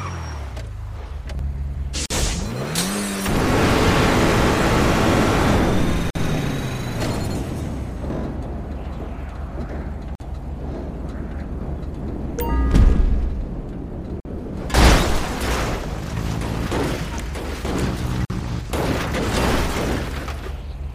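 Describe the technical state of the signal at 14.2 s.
At 14.20 s the signal drops out for about 49 ms, to 14.25 s: a gap at a join of encoded pieces. The audio was evidently encoded in separate segments, spaced every 4.0 s, and joined without removing each encoder's start-up delay or the padding on its final frame. That dead air sits in the continuous sound with smeared edges, and the sound then resumes exactly where it left off.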